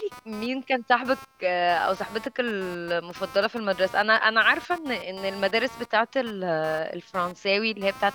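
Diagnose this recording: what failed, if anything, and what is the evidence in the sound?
Computer activity noise enters at the analogue wiring stage and runs through the whole clip as a buzzy chatter roughly 20 dB below the speech, pulsing at about 200 Hz regardless of what is said. Processor or graphics load is modulating the shared audio ground. A spectrogram shows fine vertical striations, and the waveform shows buzz filling the pauses.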